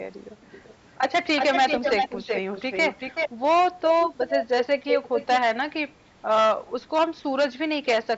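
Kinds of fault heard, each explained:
Hard clipping: The speech is driven roughly 8 dB past what some stage could pass, so the loudest parts of the waveform are sliced flat, affecting around a twentieth of the samples. Those squared-off peaks generate harmonics well above the original content, and across the whole clip every loud syllable carries a harsh, gritty fuzz rather than occasional crackle. The bandwidth still reaches up to about 8 kHz, as expected after call microphone processing.
Echo leak: A delayed second copy of the speech appears in four stretches, most likely from a far-end loudspeaker whose echo canceller let some of its own microphone pickup return down the line. At 0.46 to 0.74 s it is faint, about 25 dB down, trailing by 377 ms. From 1.36 to 3.3 s and 3.84 to 4.43 s it rises to about 5 dB below the speech at the same delay, and at 4.72 to 5.37 s it arrives 431 ms late at roughly equal level.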